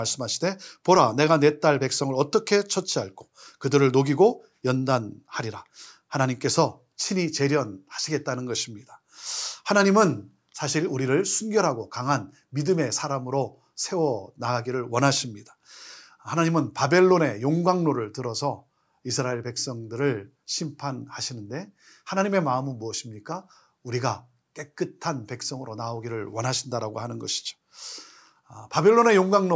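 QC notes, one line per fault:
No faults found in this speech clip. Nothing here calls for a QC note.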